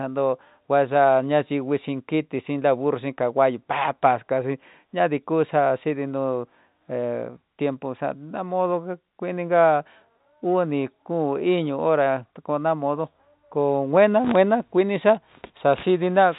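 The speech carries no technical faults; it sits within a telephone band that stops at about 3.8 kHz, as expected of G.711 mu-law coding, which fits a 64 kbps line.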